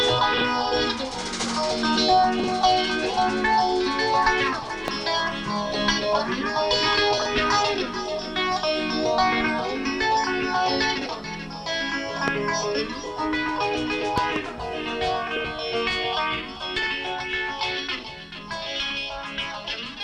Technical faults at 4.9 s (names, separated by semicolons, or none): loud pop